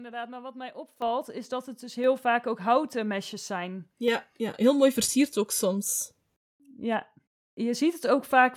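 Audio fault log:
1.02 s, microphone volume stepped up: after "wat mij", speech and background jump about 9 dB louder together, as the input volume was raised in one step.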